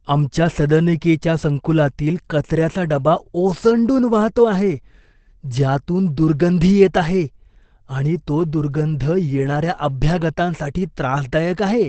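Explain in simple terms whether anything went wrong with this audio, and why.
The speech sounds muffled and hoarse from start to finish, with nothing above about 8.3 kHz, so the crisp edges of sounds like s and t are dulled. This is most likely Opus compression in its speech (SILK) mode. At a low data rate the encoder keeps only the frequency range that matters most for intelligibility and models the voice simply, discarding fine detail. The damage is plainly audible across the whole clip.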